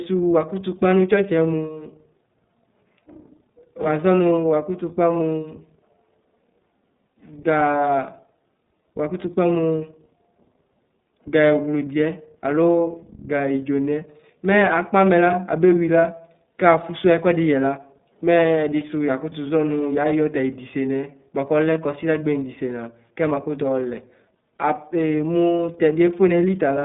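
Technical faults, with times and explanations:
Throughout, iLBC codec: the speech is limited to about 150 Hz to 3.7 kHz and sounds plainly rough and synthetic, because each 30 ms frame's excitation is coded on its own, consistent with the 13.33 kbps mode. A spectrogram shows nothing above 3.7 kHz and blurred harmonics.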